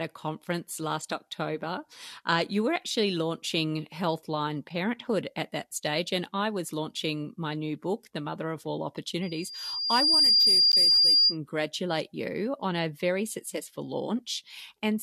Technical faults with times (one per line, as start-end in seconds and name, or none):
9.22-11.37 loudspeaker feedback squeal
10.72 gap between stream segments